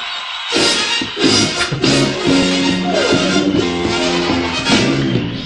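At 3.58 to 3.64 s the audio jumps abruptly forward with a blip, likely a stream segment skipped when one segment failed to load and playback resumed at the next.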